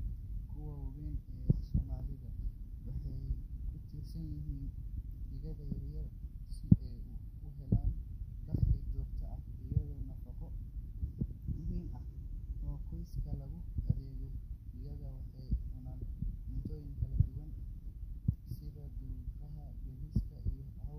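Drift correction steps at 6.31 to 7.89 s, between "digaaga yar yar" and "dakhli joogto ah iyo", and 11.43 to 13.12 s: the speech slows about 6% and drops roughly a semitone, then later runs about 6% fast and rises a semitone, likely from clock-matching software abruptly retuning playback rate.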